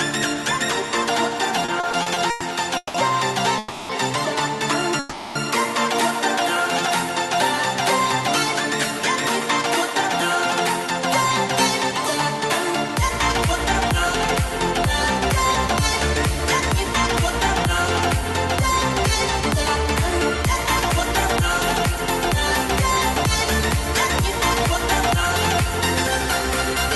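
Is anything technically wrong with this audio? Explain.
Yes, there are several delivery faults.

From 1.65 to 2.96 s there are repeated stalls (stutter): seven short gaps, the longest 170 ms, where late packets emptied the jitter buffer and the receiver stretched the last sound. About 410 ms, roughly a third of that span, is filled this way, so the audio drags. On a spectrogram the held sound shows as smeared horizontal bands. The waveform shows short repetitive stretches.

At 3.58 to 3.91 s (310 ms) and 4.99 to 5.37 s (360 ms) there is a call audio freeze, likely from packets held up in transit. The last sound is continued as a fading buzz, then the audio resumes without loss. Each freeze appears as a flat, smeared band with a decaying waveform.

From 8.99 to 19.85 s a jitter buffer speed-up runs the audio about 1% fast at unchanged pitch. Short pitch-period slices, totalling roughly 70 ms, were removed to cut excess delay. 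This is barely audible, and there is no obvious spectrogram mark beyond slightly compressed timing.

The high band stops near 12 kHz, consistent with an Opus call path at around 48 kbps.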